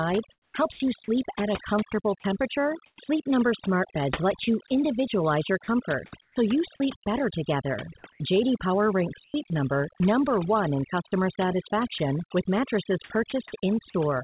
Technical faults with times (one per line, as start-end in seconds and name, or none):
0.00-14.23 overdone noise removal
0.32-0.80 comfort noise in place of the background
0.72-0.80 sound dropped by the voice detector
2.20-3.08 sound chopped by the voice detector
5.64-6.80 sound chopped by the voice detector
8.12-12.00 sound chopped by the voice detector
13.30 sound dropped by the voice detector